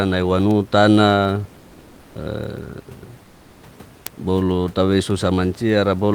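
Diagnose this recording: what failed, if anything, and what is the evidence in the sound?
Comfort noise replaces the background in two speech pauses, from 1.63 to 2.11 s (480 ms) and from 3.25 to 3.61 s (360 ms). The fault sits at the codec stage, likely Opus discontinuous transmission, where the sender stops coding during silence and the receiver synthesises filler noise. The real room noise, about 30 dB below the speech, gives way to a smooth, featureless hiss about 1 to 2 dB quieter. On a spectrogram the textured background turns into uniform, even-toned bands; on the waveform the noise floor steps slightly down and looks unnaturally steady.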